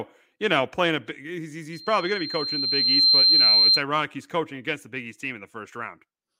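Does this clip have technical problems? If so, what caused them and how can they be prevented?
Yes. Loudspeaker feedback squeal runs from 1.73 to 3.82 s, ending before "he's coaching against the". A 4.2 kHz tone swells over roughly one and a half seconds. It peaks about 10 dB above the speech. The microphone hears its own loudspeaker, and loop gain exceeds one there. Prevent it by lowering gain, moving the mic away, or notching 4.2 kHz.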